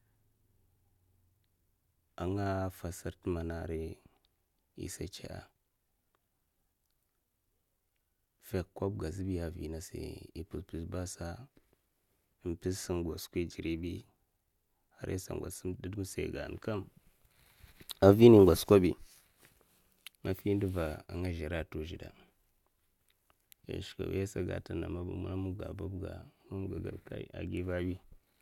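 No technical faults can be heard anywhere in the speech recording. Nothing in the audio stands out as a problem at any point, from the first moment to the last.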